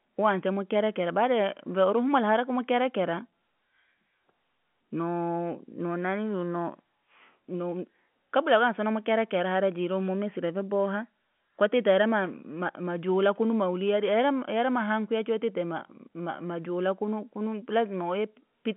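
No faults: telephone-band speech.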